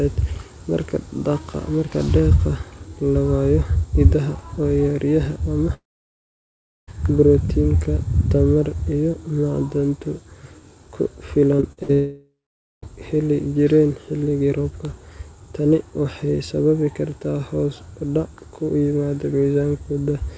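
This speech recording, band-limited to nothing above 8 kHz in a way that fits a wideband call codec such as G.722, goes silent from 5.74 to 6.89 s after a brief fading buzz. It picks up again with about 1.1 s of sound gone, likely a long network dropout. From 11.57 to 11.91 s the sound turns choppy and robotic. Four short holes, the longest 58 ms, are patched by stretching the preceding sound across roughly 40% of that span. This is repeated packet loss. It runs straight into what is likely a second long network dropout from 11.93 to 12.84 s, where about 0.9 s is lost and around half a second of it is plain silence before the audio returns.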